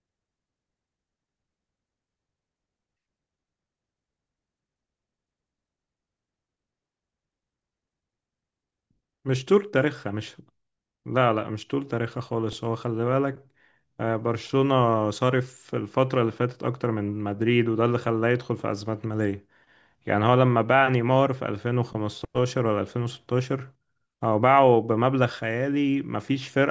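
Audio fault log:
No faults heard anywhere in this speech recording.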